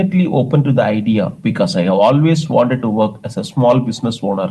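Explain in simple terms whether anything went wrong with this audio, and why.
Nothing went wrong with this recording. The speech came through a normal WebRTC call path using the Opus codec, which limits the sound to frequencies below about 12 kHz, as expected for a call.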